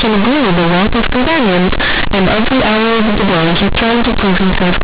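Throughout, the speech is loud and buzzy with noise in pauses: companded audio read as linear, its A-law bytes played as unexpanded 8-bit samples.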